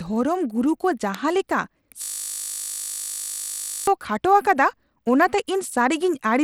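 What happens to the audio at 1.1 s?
At 1.15 s a sharp snap lands on the speech: an electrical switching spike, most likely a nearby switch or static discharge arcing into the audio line. On the waveform it is a narrow vertical needle about a millisecond wide; on a spectrogram, a thin full-height stripe.

Throughout, including this moment, the speech carries Bluetooth SBC compression, likely from a low SBC setting that fits about 96 kbps. Starved upper sub-bands make the treble flicker and drop out, and coarse quantisation adds a gritty haze. A spectrogram shows patchy, blocky energy above the lower bands.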